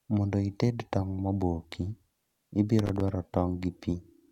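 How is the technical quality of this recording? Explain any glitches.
One fault mars the recording. From 2.79 to 3.09 s there is loose connector crackle. A dirty contact breaks intermittently, chopping the signal into an irregular scratching burst.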